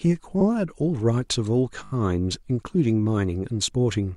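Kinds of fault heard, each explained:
Repeated frames: A run of coded frames arrived more than once, so the decoder replays the same slice of speech. At 0.40 s a 60 ms block plays twice. At 1.83 s a 20 ms block repeats four extra times, giving a stutter that adds 80 ms.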